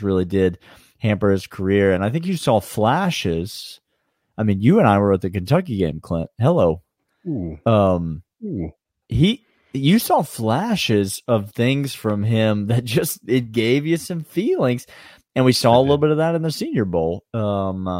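Nothing in this speech recording stood out as a technical problem on listening.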